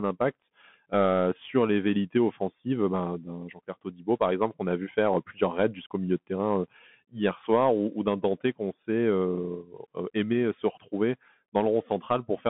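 From start to finish the speech carries the sound of a Bluetooth CVSD headset codec, which fits a 64 kbps link. The band is held to about 150 Hz to 3.4 kHz, so the speech sounds thin and boxy. Each sample is coded as a single up-or-down step whose size adapts, and loud, fast high content outruns that step. This plainly distorts the louder syllables, leaves the s sounds scratchy, and puts a granular hiss under the speech.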